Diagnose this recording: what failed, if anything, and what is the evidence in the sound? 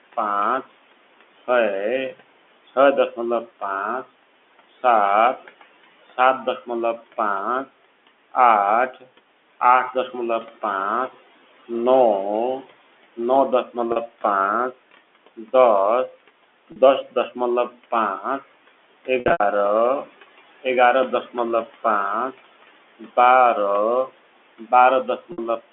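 Call processing, noise suppressor artifacts: throughout the clip the suppressor pulls steady background down by about 17 dB, so the room noise (about 19 dB under the speech) sinks between words and rises under them frame by frame, pumping with the speech.

Call processing, speech cut by the noise suppressor: the suppressor mistakes parts of the speech for noise at 3.16–10.63 s, 12.64–19.08 s, 20.05–21.85 s and 24.08–25.61 s. It drops them by up to about 11, 12, 12 and 16 dB, swallowing about a second of speech in total.

Network, packet loss with pitch repetition: losses at 13.92 s (40 ms), 16.72 s (40 ms), 19.20–19.40 s (160 ms scattered, longest run 80 ms) and 25.32 s (60 ms), consistent with 20 ms packets. The receiver repeats the last pitch period, fading over about 50 ms, giving brief held, buzzy patches on the 40 ms losses, while the longer runs fade into silence before the speech returns with a short cross-fade.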